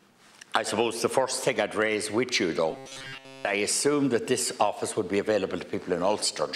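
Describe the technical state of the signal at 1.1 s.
At 1.1 s the signal is intact, with no audible fault at that moment.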